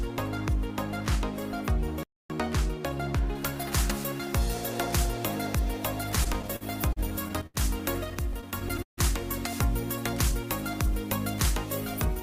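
The audio cuts out completely from 2.03 to 2.30 s, a silence of about 0.27 s. It then resumes. This is a playback stall. The likely cause is that the player ran short of data or its output thread was held up, so nothing reached the output until it caught up. From 3.35 s to the end, pre-emphasis is left on. The treble sits about 10 dB higher at 10 kHz than at 1 kHz. The boost follows the shape of the FM 50 µs curve. A treble lift was applied and the matching de-emphasis cut never followed. The result is thin, bright and hissy, with sharp sibilance. Repeated stalls, a stutter, appear in two stretches. The first runs from 6.15 to 7.57 s. It has ten short holds totalling about 0.23 s, and the longest is 75 ms. The second runs from 8.10 to 9.00 s. It also has ten holds, about 0.23 s in all, and the longest is 149 ms. Here the playout buffer kept draining because data arrived late or too slowly. 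Each time, the last sound was stretched to cover the wait. No audio is lost. The flow drags and hiccups instead, and about a sixth of the first stretch and a quarter of the second is filled-in sound.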